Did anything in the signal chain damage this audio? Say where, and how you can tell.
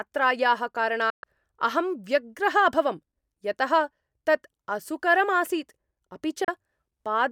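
Yes. A digital broadcast dropout, at the reception and decoding stage: the speech fades out over about 3 ms and goes silent from 1.10 to 1.24 s, then again for 32 ms at 6.44 s. Both gaps fit whole 32 ms frames failing and being muted, so that audio is lost.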